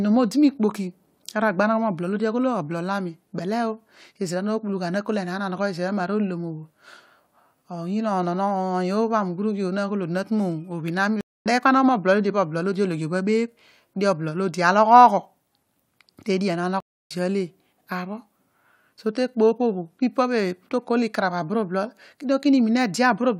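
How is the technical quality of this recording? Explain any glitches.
The recording has two stream reconnect dropouts. At 11.21–11.46 s and 16.80–17.11 s the connection broke and a fresh decoder restarted. There's a gap of about 0.24 s and 0.29 s respectively, then the speech picks up a little later, skipping about 0.2 s and 0.3 s.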